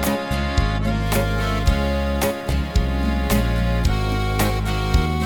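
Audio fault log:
1.03–5.25 s, sample clock jitter: the converter's clock wanders by around 7 microseconds, so each sample lands slightly early or late. The error tracks the waveform's slope, adding a grainy hiss about 25 dB below the signal that thickens on loud, bright passages.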